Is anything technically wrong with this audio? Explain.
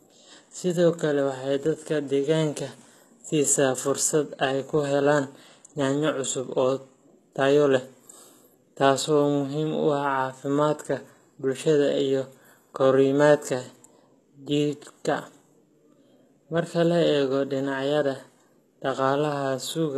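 Yes. Throughout the speech, s sounds come across gritty and lispy, with a bright but synthetic-sounding treble and nothing above 12.3 kHz. This is likely HE-AAC compression at a bitrate around 16 kbps, where upper bands are copied from lower ones rather than coded. The treble sounds metallic instead of dull, which sets it apart from simple low-pass filtering.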